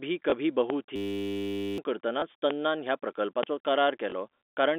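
A telephone-band speech recording, carried over G.711 mu-law coding that limits it to roughly 250 Hz to 3.6 kHz, has three kinds of fault. Packet loss with the last packet repeated occurs at 0.30, 2.20 and 4.10 s. Each time, a 20 ms stretch is replaced by a copy of the audio just before it, which fits a single lost 20 ms packet. The copy seldom joins the waveform at a matching point in the pitch cycle, so each event is a small blip rather than a gap of silence. Because only one packet goes missing each time, no sustained 50 Hz buzz builds up, and that keeps these apart from the longer loop described below. Two loud pops land at 0.70 and 3.43 s, each about 24 ms long and peaking at roughly 15 dB above the speech. The speech continues underneath, which separates them from the packet repeats, where the audio itself is replaced. A brief voltage step or pulse, such as a static discharge or a driver glitch, is the likely cause. 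The most serious fault is a system hang loop from 0.96 to 1.78 s. The playback hardware kept cycling through one 10 ms piece of audio while the system stalled, giving a steady 100 Hz buzz for over 0.8 s, and roughly 0.7 s of speech is lost. Its exact repetition of one tiny fragment at a fixed rate, held for so long, is what marks it as a hang loop rather than concealment of lost packets.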